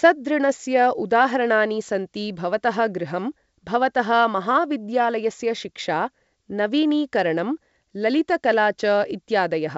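No technical faults turn up anywhere in this speech, which comes through G.722 wideband telephone coding working as intended.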